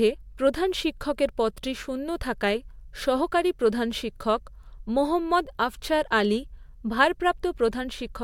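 Speech, with no technical faults to report.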